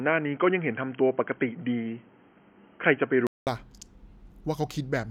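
The input was most likely switched to a poorer device, and the clip opens on it: from the start to 3.47 s the speech passes through a path that carries nothing above 3.2 kHz, so it sounds dull and boxy, with a faint floor of new noise far beneath it. At 3.47 s a silence of about 0.2 s marks the change back, after which the speech opens up in brightness and shifts in level by roughly 5 dB.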